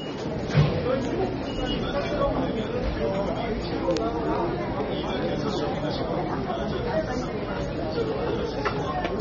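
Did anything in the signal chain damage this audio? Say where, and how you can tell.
Yes, at the codec stage. The damage runs through the whole clip. Nothing is present above 6.9 kHz, so the top end sounds dull and closed in. The codec damage is plainly audible: there is smearing, and a warbling, fizzy texture on sustained and bright sounds. This is likely AAC compression, in AAC-LC form. At a rate that fits about 24 kbps, the encoder cuts the high band and quantises the remaining spectrum coarsely against its hearing model.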